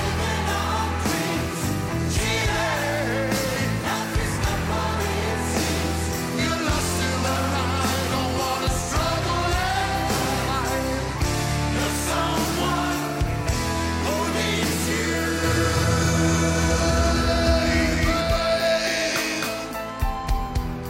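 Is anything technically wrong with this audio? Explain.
Yes, there's a doubled audio track from about 15.44 s through to the end. A second copy of the sound comes in abruptly, roughly a third of a second behind the original and at about the same level, so everything gets a clean, full-band slap-back repeat with no decay or room colour. The likely cause is the same signal being picked up again through a slower path, or an edit leaving two out-of-step copies stacked.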